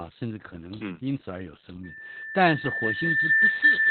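From the start, the speech carries Opus voice compression. Nothing is heard above about 4.4 kHz. The coder has dropped to narrowband, which fits a rate near 8 kbps. The excitation is coarsely coded. The voice sounds muffled, hoarse and somewhat robotic, and the damage is heavy.

At 1.84 s a loudspeaker feedback squeal begins. The microphone is picking up its own loudspeaker, and the loop gain tops one at 1.8 kHz. That tone swells over about two seconds. It ends roughly 10 dB above the speech and runs to the end.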